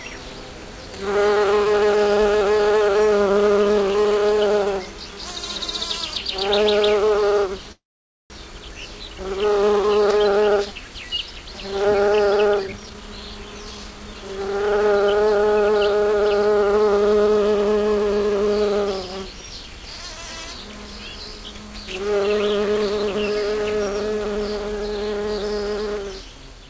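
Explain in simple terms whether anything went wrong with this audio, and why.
Two things went wrong in this recording of everyday sounds as it travelled over a call connection, which also carries nothing above 8 kHz.

First, a call audio freeze from 7.72 to 8.32 s: audio packets were likely delayed in transit, so the receiver ran out of sound to play. It briefly stretched the last bit of sound, then went silent for about half a second. When the packets arrived, playback picked up exactly where it stopped, so nothing is lost, but there is a gap.

Second, a jitter buffer speed-up from 12.45 to 14.64 s: the receiver had stored too much audio and tried to catch up by repeatedly cutting out tiny slices. About half a second was removed, so this stretch plays roughly 26% faster at the same pitch and sounds rushed.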